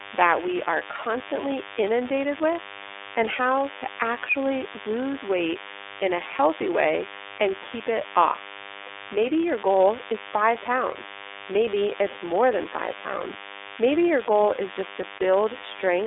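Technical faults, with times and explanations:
Throughout: DECT cordless phone buzz. A nearby DECT transmitter's radio bursts every 10 ms are rectified by the audio circuit, giving a thin, steady 100 Hz buzz, about 15 dB below the speech.
Throughout: iLBC codec. Speech passes through iLBC, which codes each 30 ms frame independently at a bitrate fitting 13.33 kbps. Nothing above 3.8 kHz survives, leaving plainly audible rough, synthetic artefacts.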